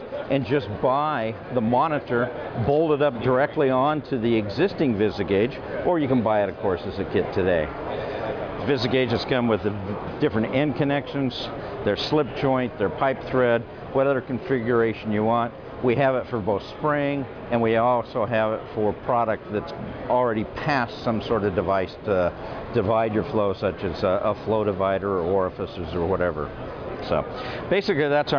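Nothing stood out as a problem on listening.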